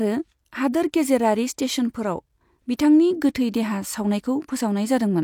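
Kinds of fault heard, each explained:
No faults heard.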